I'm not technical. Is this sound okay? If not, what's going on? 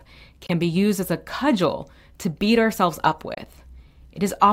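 No, not quite. The speech briefly drops to silence twice, at 0.46 to 0.50 s just before "be used as a", and at 3.34 to 3.39 s right after "to beat ourselves up", then carries on as if it never stopped. That's likely a Bluetooth dropout: a bit of audio reached the headphones too late and got skipped.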